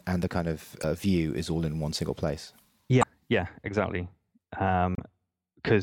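Three brief glitches from damaged data in a compressed stream, at 0.80, 2.99 and 4.95 s, each about 40 ms long. The decoder misreads corrupted frames and resyncs, giving a short chirp, squawk, click or hole in the speech each time.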